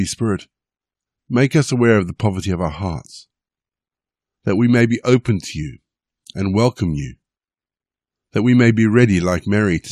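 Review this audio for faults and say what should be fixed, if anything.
No faults can be heard, so nothing needs fixing.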